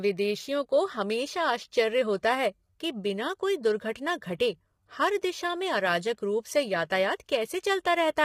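Throughout, the speech sounds rough and grainy, likely heavy low-delay AAC compression near 24 kbps; the spectrogram shows blurred harmonics with noise filling the gaps.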